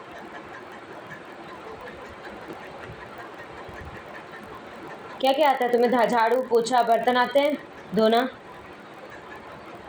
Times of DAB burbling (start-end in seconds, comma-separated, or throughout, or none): none